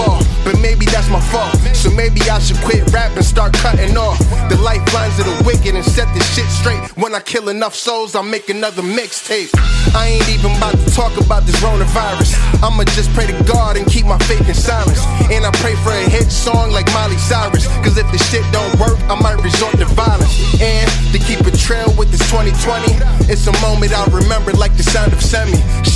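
Nothing stood out as a technical problem on listening.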